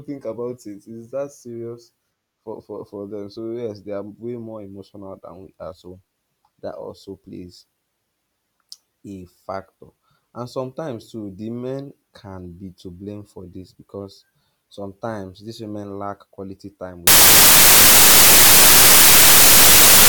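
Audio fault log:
17.07–20.09 s, samples built from the wrong bytes: the reader misassembles each sample's bytes, so fast-changing low bits dominate, turning the speech into loud, harsh broadband noise to the end.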